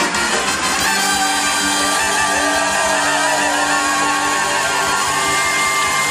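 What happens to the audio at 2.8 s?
Nothing goes wrong at 2.8 s: the audio carries on intact through that moment with no audible fault.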